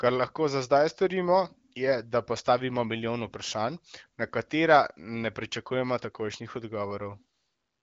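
No faults are present; the speech carries the light coloration and roughly 7.8 kHz top end expected of the AMR wideband (HD Voice) codec, at a quality that fits its 15.85 kbit/s mode.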